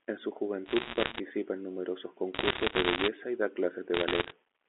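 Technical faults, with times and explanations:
0.66–1.20 s, bit errors on a digital phone line: flipped bits, at a rate of roughly one to two percent, corrupt single samples, producing sharp ticks and crackle over the speech just before "en numerosos".
2.34–3.08 s, bit errors on a digital phone line: flipped bits after "en numerosos" distort individual samples on the telephone-band signal, giving crackle that stops before "y da".
3.94–4.32 s, bit errors on a digital phone line: errors, at about one percent, flip bits after "y da", so isolated samples jump and sound as sharp ticks.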